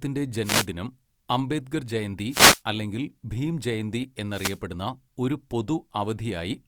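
Three short swishes of static break through this speech recording, at 0.42 to 0.67 s, at 2.28 to 2.61 s just after "അംബേദ്കർ ജയന്തി" and before "അല്ലെങ്കിൽ ഭീം ജയന്തി", and at 4.29 to 4.61 s following "ജയന്തി അല്ലെങ്കിൽ ഭീം ജയന്തി". Each is a wireless microphone noise hit. The FM radio link briefly fades as reflected signals cancel, and receiver noise rises for a quarter to a third of a second.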